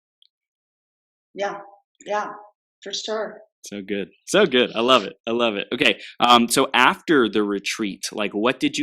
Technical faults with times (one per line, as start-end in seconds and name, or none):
4.92-4.96 hard clipping
5.82-5.89 hard clipping
6.24-6.37 hard clipping
6.78-6.88 hard clipping